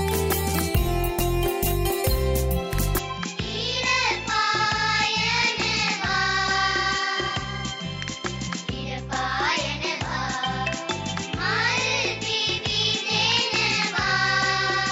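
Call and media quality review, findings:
From 2.98 s to the end: sound turns dull, nothing above 7.6 kHz, drops about 5 dB, faint new background noise, no gap. Likely an input switched to a poorer device.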